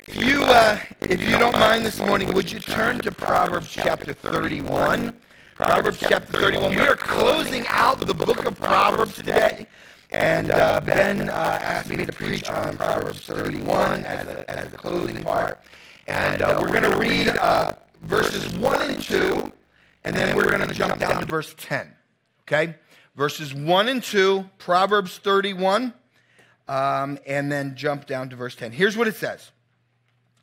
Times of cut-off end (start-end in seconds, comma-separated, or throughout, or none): none